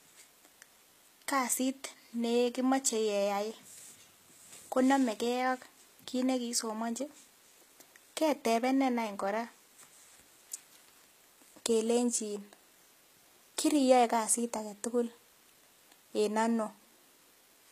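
Throughout, the speech was likely passed through HE-AAC compression at a rate fitting about 20 kbps. Only the lower spectrum is coded, and the treble is rebuilt from copied bands. The damage is plainly audible: gritty, metallic s sounds, and nothing above 14.9 kHz.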